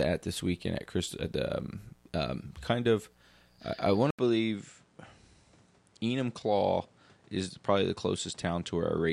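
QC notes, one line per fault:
throughout – mains buzz: a steady, raspy 60 Hz buzz roughly 40 dB under the speech, with sharp switching spikes whose harmonics reach into the kilohertz range rather than a smooth low hum.
4.11–9.12 s – input switched to a poorer device: right after "of I I want", an 80 ms silence, then the speech loses everything above 10 kHz, drops about 5 dB and gains a new noise floor roughly 35 dB down. This is likely a change to a lower-grade microphone. The gap and the new noise set it apart from a simple EQ or filter change.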